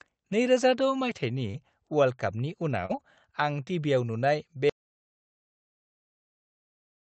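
At 1.51 to 1.56 s and again at 2.86 to 2.91 s, short concealed packet loss leaves a brief smear in the speech. About 20 ms and then about 40 ms of audio arrived too late, and the receiver bridged each hole by extending the preceding sound before blending back. Unlike a dropout, the gap is filled rather than silent.

From 4.70 s to the end, an audio dropout to silence cuts the speech off mid-flow. The input was likely lost, and what follows is silence with no room tone, which marks it as a lost signal rather than a pause.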